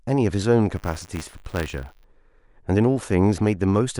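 From 0.75 to 2.05 s there's buffer tearing: a robotic buzz at 100 Hz, which fits a 10 ms buffer period. Writer and hardware reader have slipped, so a sliver of each period, a couple of percent, replays audio about 30 ms old between two hard joins.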